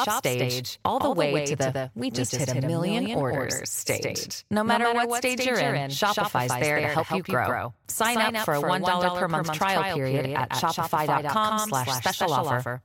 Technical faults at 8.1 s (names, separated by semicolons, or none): doubled audio track